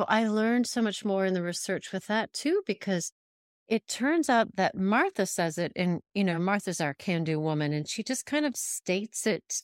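A short recording of speech, with no technical fault to be heard anywhere in it. Nothing in the audio points to a problem with its capture, processing or playback.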